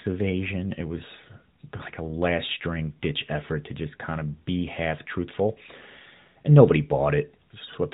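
At about 1.78 to 1.83 s, just before "like a last string", there is a lost AMR speech frame. The gap is consistent with a single 20 ms frame that failed its checksum after a radio error. The decoder filled it by repeating the last good pitch and vocal-tract parameters at reduced gain. That produces a brief dip or warble, after which the speech resumes a little weak. Throughout, the audio stops at 4 kHz with light AMR-NB coloration, which fits the 12.2 kbps mode.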